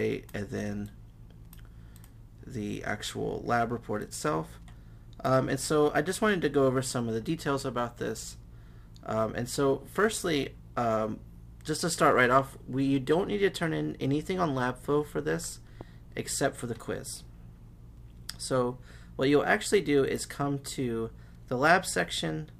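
A loud pop sits at 15.81 to 15.83 s, a single sharp click standing a few decibels above the surrounding sound, which continues underneath. It is likely a brief voltage pulse, such as static or a switching glitch, added to the signal and then shaped by later circuitry.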